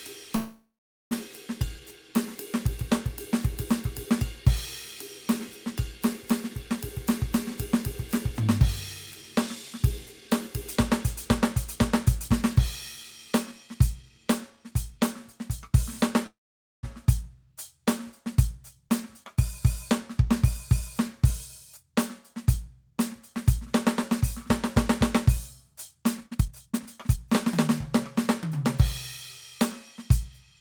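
From 0.35 to 1.13 s there is a call audio freeze: packets were likely held back in transit and the jitter buffer ran dry. The receiver stretched the last sound into a fading buzz or hiss, then about 0.44 s of silence, before the music resumed exactly where it had stopped, so 0.76 s of gap was inserted with nothing lost.

From 6.93 to 15.83 s a jitter buffer speed-up follows. The buffer held more audio than its target, so the receiver trimmed tiny pitch-period slices repeatedly, running the music at 105% with pitch unchanged, shedding around half a second and nudging the tempo ahead.

A second call audio freeze, from 16.27 to 16.85 s, behaves the same way: a brief fading continuation, about 0.5 s of silence, then the music picks up intact after a 0.56 s hole.

Further jitter buffer speed-ups come at 18.88–19.36 s (106%), 20.27–24.47 s (102%) and 25.36–28.64 s (120%). The last one removes roughly 0.7 s and clearly rushes the music, breaking its steady pulse.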